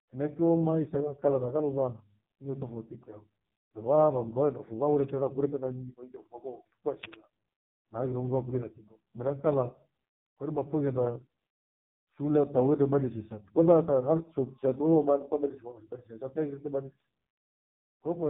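Throughout, the speech sounds buzzy and synthetic, with nothing above 3.8 kHz: heavy AMR narrowband mobile codec damage, consistent with its lowest 4.75 kbps mode.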